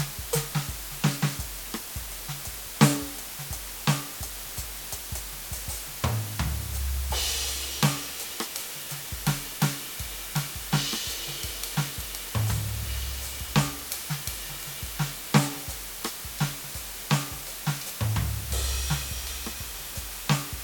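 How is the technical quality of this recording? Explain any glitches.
The technical quality is poor. A loud, even hiss runs through the whole music recording, sitting only a few decibels below the music itself. This is low bit depth with dither. The sound points to about 6 bits, so each sample is rounded to a very coarse step, with random dither mixed in before rounding. The dither turns the rounding error into steady white noise instead of distortion. That is what distinguishes it from undithered low bit depth, whose error follows the music and sounds gritty or buzzy. Here the hiss stays constant and even, and the music underneath keeps a clean tone.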